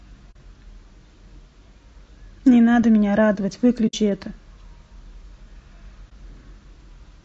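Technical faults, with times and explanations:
throughout: low-delay AAC compression. The speech sounds rough and grainy, with noise between harmonics, likely from AAC-ELD at around 32 kbps, whose short frames resolve pitch poorly.
0.31–0.36 s, 3.87–3.94 s, 6.09–6.12 s: AAC frame loss with muting. Gaps of about 40, 60 and 20 ms fade out and back in smoothly, as the lost spectrum is zeroed.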